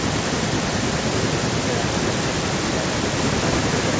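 Speech in which every phrase is trailed, throughout the clip, by a quieter, thinner copy arriving about a fifth of a second later and sitting about 11 dB down. This is echo with no canceller: the far end's loudspeaker feeds its microphone, returning the talker over the network, through call microphone processing with nothing above 8 kHz.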